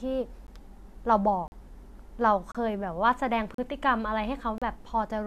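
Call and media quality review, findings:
Gap between stream segments, speech. Hard-edged silent holes at 0.47 s, 1.48–1.52 s, 2.52–2.55 s, 3.54–3.58 s and 4.58–4.62 s, roughly one per second, matching 1.0 s segments. Durations around 15, 41, 27, 39 and 35 ms. Segment timestamps don't quite butt up, so the player pads each seam with silence. Nothing dropped, the speech just gets pushed later. Check segmenter/packager timestamp alignment.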